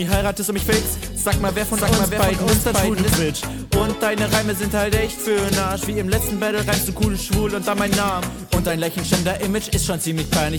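From 1.50 s to 3.16 s, a second full-band copy of the audio plays about half a second behind the first, at roughly the same level, with no decay or room colour. It starts and stops abruptly. This doubled audio track likely comes from a slower second capture path.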